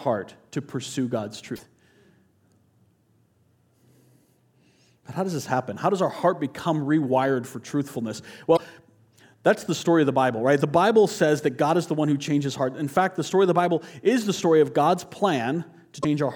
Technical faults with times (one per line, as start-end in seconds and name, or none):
1.52-1.60 damaged data in a compressed stream
8.53-8.60 damaged data in a compressed stream
16.00-16.05 damaged data in a compressed stream